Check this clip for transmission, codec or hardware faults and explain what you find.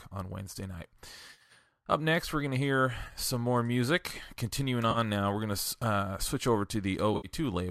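The clip has four short dropouts from AAC frame loss with concealment, at 1.31–1.52 s, 3.05–3.18 s (between "we're going to hear" and "some more music"), 4.91–4.98 s (just before "now we're going") and 7.14–7.27 s (after "uh switch over"). Whole coded frames went missing in scattered bursts, and the decoder patched each gap from the last good spectrum. Each gap becomes a brief smeared, noisy, phasey patch rather than silence. The light roughness throughout is likely from low-bitrate, low-delay AAC coding.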